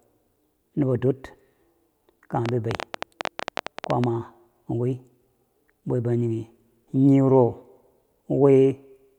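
From 2.46 to 4.05 s there's a train of clicks riding over the speech, about 12.7 per second but unevenly spaced, so it comes across as a stuttering tick rather than a steady buzz. Around twenty of them, all much the same shape, poking roughly 15 dB above the speech and clearly audible in the gaps too. That's likely interference leaking in from nearby gear or a faulty connection or power supply.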